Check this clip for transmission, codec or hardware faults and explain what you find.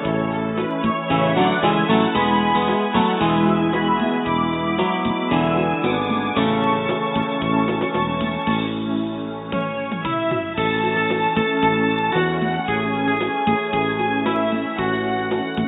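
One hardware timing fault is present.

Clock slip clicks run from 0.12 s to 15.55 s as faint, evenly spaced ticks roughly every 0.7 s, around thirty in all. The likely cause is two unsynchronised clocks differing by roughly 40 ppm. Each time that drift totals one sample, a single sample is dropped or repeated.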